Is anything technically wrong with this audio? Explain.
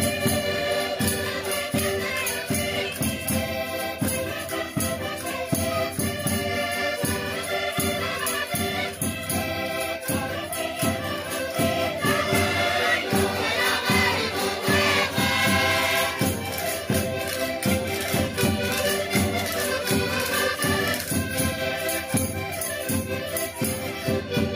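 No, there is no technical fault to report in this audio.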